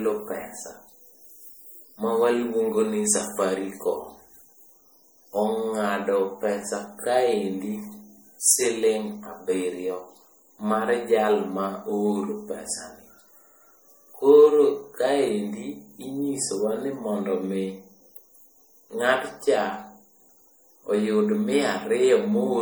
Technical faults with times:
0.00-22.61 generation loss

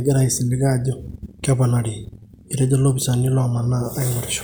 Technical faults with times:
none

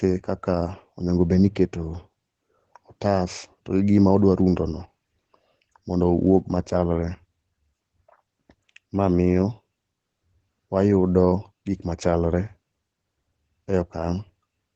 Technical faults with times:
0.00-14.75 Opus voice compression

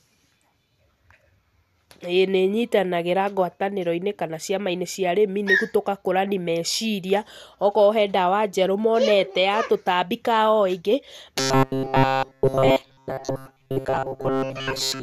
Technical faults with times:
11.40-15.03 robotic sound from repeated short buffers

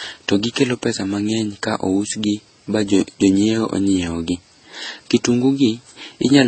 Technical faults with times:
0.00-6.47 transcoding between lossy codecs

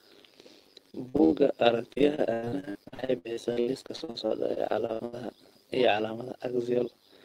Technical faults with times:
0.00-7.25 overlap-add ripple
0.91-1.33 repeated packet loss (robotic sound)
1.93-5.14 repeated packet loss (robotic sound)

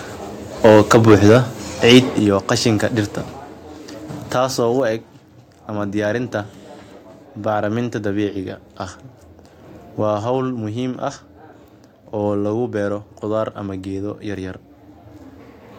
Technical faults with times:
0.64-1.38 microphone overload
1.12 microphone volume stepped down
1.89-1.99 microphone overload
2.19 microphone volume stepped down
3.21 microphone volume stepped down

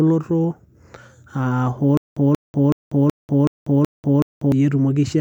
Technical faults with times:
1.97-4.52 stutter with silent gaps

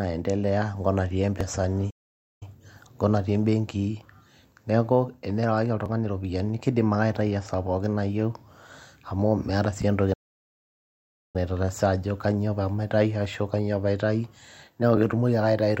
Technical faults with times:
1.41-14.97 clock drift buffer slips
1.90-2.43 playback stall
10.13-11.36 playback stall

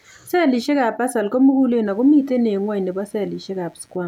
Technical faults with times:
1.85-4.08 computer activity noise

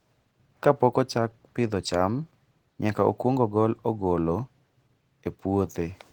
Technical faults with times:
0.00-6.12 Opus voice compression

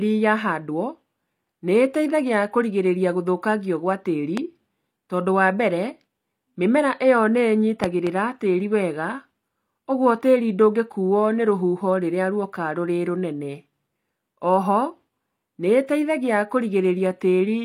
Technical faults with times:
4.37-4.39 loud pop
7.84-8.09 loud pop

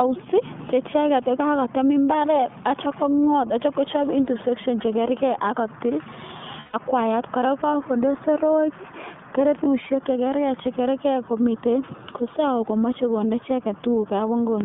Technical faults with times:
0.00-14.65 iLBC codec
6.60-6.75 lost iLBC frames
9.64-9.68 lost iLBC frames

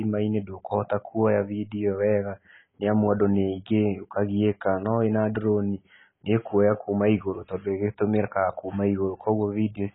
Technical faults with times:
0.00-9.95 AAC compression

